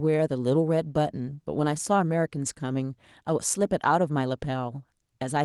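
Nothing in this recording stood out as a technical fault on listening.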